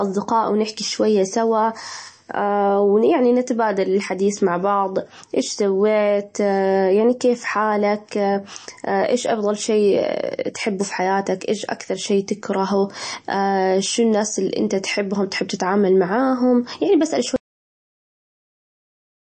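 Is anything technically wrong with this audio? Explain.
Yes. Two faults can be heard in this speech.

MP3 compression runs through the whole clip and is plainly audible. Nothing is present above about 8.3 kHz, where the encoder has cut the treble. That cut-off and the damage point to a low bitrate near 32 kbps. With so few bits, weak frequency lines are dropped and then return from frame to frame. The sound turns watery and swirly, s sounds get a metallic edge, and attacks smear. MP3 coding is the likely cause.

A cut-off end occurs at 17.36 s, right after "تتعامل معاهم يعني بسأل". The final buffers were never written out, so playback stops mid-sound. There is no decay. The audio falls straight to digital silence, which lasts about 1.9 s to the end.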